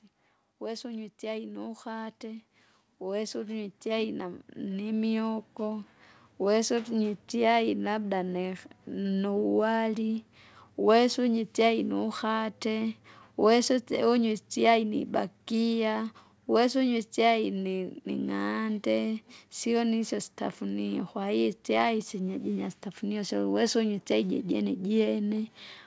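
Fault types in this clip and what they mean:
Automatic gain rising: the speech and its background noise swell together, climbing by about 12 dB from 0.6 to 8.64 s. The automatic gain control judged the input too quiet and raised its gain slowly, so everything grows louder in step.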